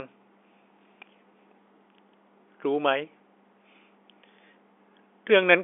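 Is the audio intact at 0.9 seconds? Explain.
Yes, the speech at 0.9 seconds is intact, carried through the G.711 telephone coding as expected, with the familiar narrow telephone band and nothing above about 3.8 kHz.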